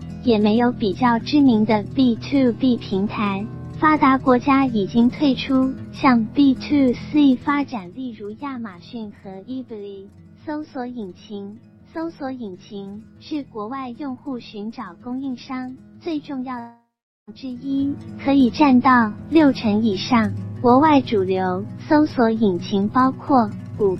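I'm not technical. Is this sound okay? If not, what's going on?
No. From 7.34 to 8.0 s the volume drops sharply, and from 17.48 to 17.92 s it rises again. Both times you can hear zipper noise, a fast ticking or buzzing. The volume moves in small jumps, about fifty a second, instead of sliding, and each jump makes a tiny click.

From 16.59 to 17.30 s there is a long network dropout. Almost 0.7 s of sound is missing. The last bit of sound is stretched into a fading buzz, then about 0.4 s of silence follows, and the sound returns with that piece gone. Lost data on a network connection is the likely cause.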